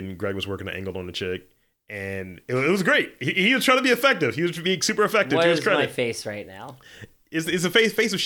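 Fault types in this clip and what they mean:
No technical faults can be heard in this speech clip. There is nothing to list here.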